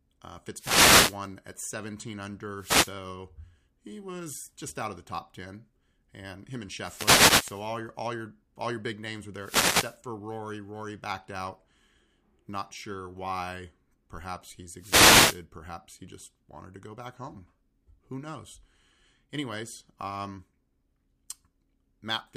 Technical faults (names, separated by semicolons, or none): wireless microphone noise hit